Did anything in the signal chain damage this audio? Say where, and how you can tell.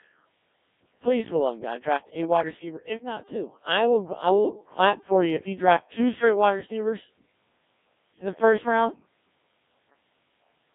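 Yes, at the codec stage: the speech is run through a Codec 2 vocoder for the whole clip. It sounds robotic and buzzy because the decoder rebuilds it from sine waves driven by pitch, voicing and envelope, which fits about 1.3 kbit/s. Its 200 Hz to 3.6 kHz band alone would only sound thin, not synthetic.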